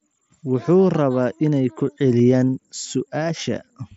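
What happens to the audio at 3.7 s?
Nothing goes wrong at 3.7 s: the speech carries on intact through that moment, heard through the wideband Bluetooth mSBC headset codec with its usual light graininess on louder sounds.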